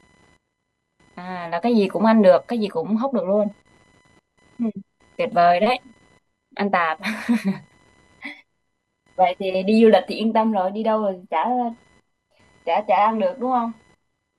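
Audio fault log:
throughout: computer activity noise, a faint buzzing chirp pulsing at around 1 kHz, roughly 40 dB below the speech. Changing load inside the computer disturbs the ground it shares with the audio circuit, so the buzz tracks the machine's activity rather than the speech.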